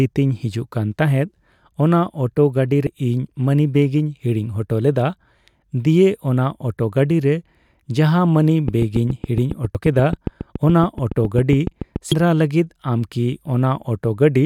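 A brief glitch at 2.86 s, recurring at 9.75 s and 12.12 s, marks damaged data in a compressed stream: corrupted frames make the decoder lose sync. From 8.68 to 11.97 s a steady ticking, about thirty clicks at 7.2 per second and roughly 10 dB above the speech, forms a train of clicks, likely from electrical interference or a faulty connection.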